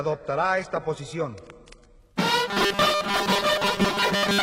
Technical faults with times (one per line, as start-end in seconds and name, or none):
0.00-2.00 adaptive stream starting at a low bitrate
2.49-4.42 robotic sound from repeated short buffers